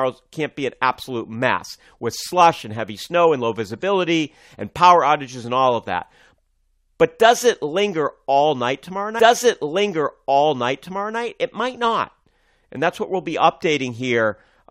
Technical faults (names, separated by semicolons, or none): stream segment repeated